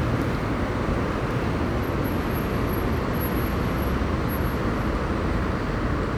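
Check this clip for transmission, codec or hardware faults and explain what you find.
One fault is present, running the full length of the clip: a doubled audio track. A second, full-band copy of the sound trails the original by about a second, a few dB quieter, with no decay or room colour. It likely comes from the signal being captured twice, once through a slower path, so the two copies sum out of step and every event is heard again as a flat, exact repeat.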